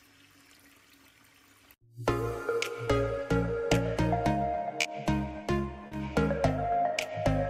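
Three brief spots of short concealed packet loss occur at 2.85–2.89 s, 4.81–4.87 s and 5.87–5.93 s, with 20, 40 and 40 ms of audio missing. The decoder fills each gap by extending the preceding sound, so a spectrogram shows a smeared, frozen patch where fine detail stops, then blends back.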